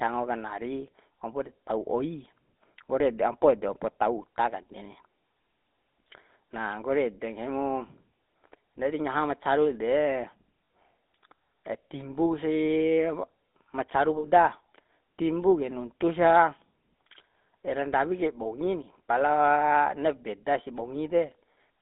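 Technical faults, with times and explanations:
Throughout, GSM full-rate codec: buzzy, gravelly speech confined to about 250 Hz to 3.7 kHz. A spectrogram shows empty bands above and below that range, consistent with 13 kbps pulse-excited coding.
10.64 s and 14.18 s, lost GSM frames: just after "ma caru de" and "ma caru", about 60 ms of sound freezes into a metallic ring as the last good frame repeats. This appears as frozen, smeared harmonics on a spectrogram.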